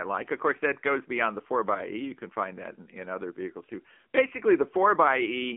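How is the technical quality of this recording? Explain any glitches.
The technical quality is poor. One fault runs throughout. Across the whole clip, AMR narrowband mobile codec damage is plainly audible. The speech sits in a phone band of roughly 250 Hz to 3.4 kHz, with nothing above 3.4 kHz. The codec models the vocal tract and drives it with sparse pulses in short frames. The buzzy, synthetic edge points to a low mode, around 7.4 kbps.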